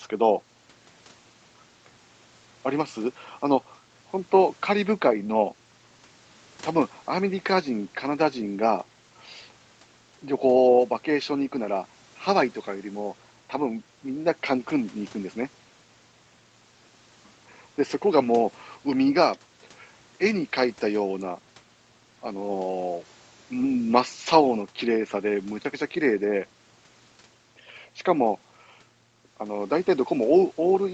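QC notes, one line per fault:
Nothing to flag here: just speech carried over a call path, with the top end stopping at 8 kHz the way that route normally leaves it.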